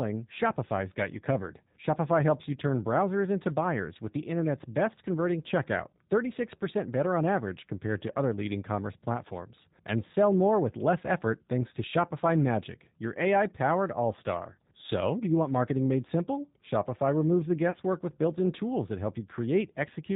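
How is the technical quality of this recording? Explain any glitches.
The recording is clearly degraded by low-bitrate voice coding, with one brief dropout near the end.

Throughout, G.729 codec damage is plainly audible: speech sounds rough and synthetic with nothing above 4 kHz, consistent with 8 kbit/s G.729A rebuilding speech from coarse model parameters.

At 17.71 to 17.77 s, between "removes the" and "with built in tools", VoIP packet loss concealed by the speech codec replaces about 30 ms of lost audio, which fits a single lost packet. The decoder extrapolates its last pitch and filter with falling gain, giving a short, stretched, fading smear.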